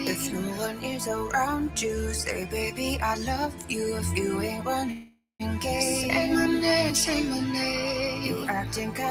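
A speech-tuned noise suppressor applied to music or sounds runs throughout. It mistakes steady tones and tails for noise, so levels pump by around 5 dB.

From 3.5 to 3.67 s, the sound is cut by the noise suppressor. It drops by about 6 dB, and the held part sinks while onsets survive.

From 4.91 to 5.42 s, the sound stops and a fading buzz or hiss fills about 480 ms, ending in roughly 180 ms of silence. The audio then resumes where it left off, 482 ms late. This is likely a call audio freeze, with delayed packets emptying the jitter buffer.

From 8.15 to 8.48 s, the suppressor cuts the sound again. It dips by about 4 dB.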